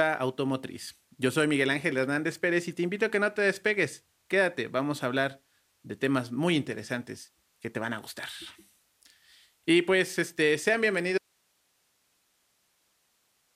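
Speech that suffers an audio dropout to a faint residue at 11.18 s, right after "pues este sean": it cuts abruptly to hiss roughly 45 dB below the voice and stays there to the end, likely a signal loss upstream while the path stayed live. On a waveform the envelope collapses to a thin flat band; a spectrogram shows harmonics vanishing into uniform broadband noise.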